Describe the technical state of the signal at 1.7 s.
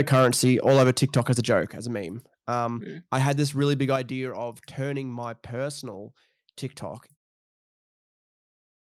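Right at 1.71 s, just after "as a joke", the whole level drops by about 7 dB in one step, voice and background together, and stays down into "as a meme". That's a microphone volume stepped down, most likely the call software lowering the input gain after judging the mic too hot.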